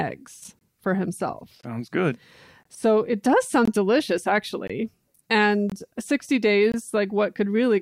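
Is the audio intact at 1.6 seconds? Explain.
No. A gap between chunks interrupts the speech from 1.61 to 1.63 s. A hole of about 21 ms opens there, with hard edges on both sides. The audio seems to arrive in one-second chunks. Silence is inserted at the join instead of the next chunk starting on time. The most plausible sources are codec padding or a player that starts the chunk late. Nothing is lost from the speech itself. It simply stops briefly and resumes, heard as a sharp dropout.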